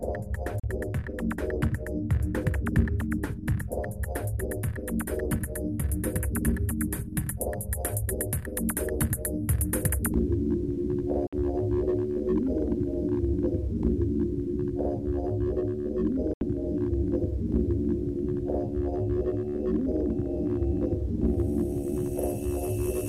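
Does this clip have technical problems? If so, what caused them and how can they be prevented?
Yes. The audio cuts to silence three times: at 0.60 to 0.64 s (about 37 ms), 11.27 to 11.33 s (56 ms), and 16.33 to 16.41 s (75 ms). These are likely Bluetooth dropouts, where late packets were discarded and the sound resumed further along. The gap lengths fit two, three and four lost packets. Keeping the headphones close to the source, with no obstructions or 2.4 GHz interference, prevents them.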